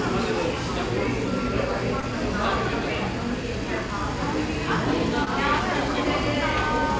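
At about 2.00 s and again at 5.25 s there's short concealed packet loss, where roughly 20 ms of audio arrived too late each time. The receiver papered over the gaps by extending the preceding sound and crossfading back, which you hear as a quick smear or wobble.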